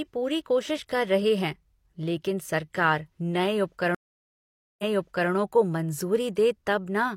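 At 3.95 s the speech drops into 842 ms of silence, a stream reconnect. Playback returns with a fresh decoder, repeating about 512 ms of earlier audio.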